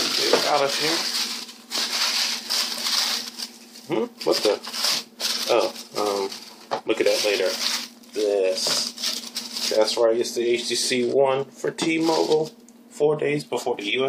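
No technical faults can be heard anywhere in the audio.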